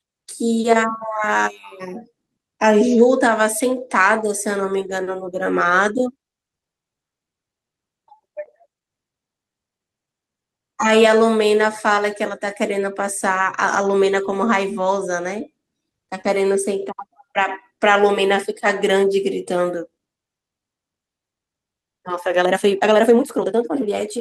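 At 16.21 to 16.25 s, part of the speech stream arrived too late or not at all. This is a short concealed packet loss: for about 20 ms the receiver had nothing to decode and invented a fill of about 19 ms by carrying the preceding sound forward, then crossfaded back into the real signal. The result is a brief smear or wobble where the sound seems to stall for an instant rather than break off, and any short consonant there can disappear.

Overlapping the end of that gap, from 16.23 to 16.25 s, is a lost packet rebuilt from error correction. One packet went missing, but the next one carried a coarse, low-bitrate duplicate of it, and the decoder played that duplicate back as 20 ms of rebuilt audio. Nothing drops out here, but those few hundredths of a second sound grainier and noisier than their surroundings.

From 22.37 s to the end, the speech suddenly runs at about 1.83 times its previous pace while its pitch stays unchanged. 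The cause is likely a time-stretched section, where software squeezed the audio to fit a shorter length by discarding small slices and splicing the remainder together. That splicing is what makes this last stretch sound hurried, with syllables crowding into each other at an unnatural rate.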